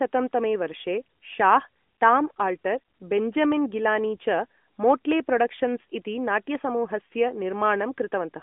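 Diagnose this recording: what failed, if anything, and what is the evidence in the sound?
Nothing here has failed; what you hear is a mobile call doing its normal job, with the speech carried over the AMR narrowband mobile codec at 12.2 kbps inside a telephone band of roughly 200 Hz to 3.5 kHz, so nothing reaches above about 3.7 kHz.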